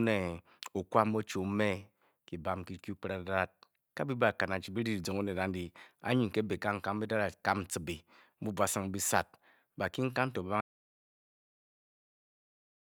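An audio dropout to silence begins at 10.61 s, right after "bakinkan to", and runs to the end of the clip, about 2.3 s in all. The speech stops abruptly in mid-flow and gives way to silence, with no room tone or background hiss beneath it. The input was likely lost through a disconnected device, a failed link or an accidental mute while recording carried on writing silence, so whatever followed is missing.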